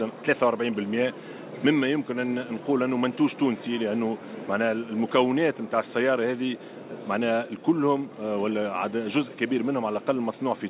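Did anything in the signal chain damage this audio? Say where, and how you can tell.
No, nothing in the signal chain damaged this audio; it carries nothing above 4 kHz, which fits the normal band limit of a G.711 narrowband call path.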